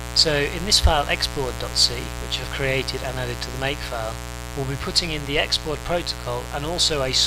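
From start to finish the audio carries a mains buzz at 60 Hz, sitting only around 10 dB below the wanted signal. Sharp switching spikes from a dimmer, rectifier or unshielded line have been picked up twice per mains cycle, and their harmonics stack up from 60 Hz into the kilohertz range. The result is a constant, raspy buzz rather than a smooth hum, prominent enough to compete with the material throughout.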